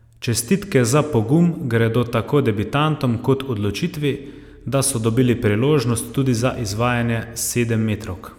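Nothing stood out on listening to the speech recording.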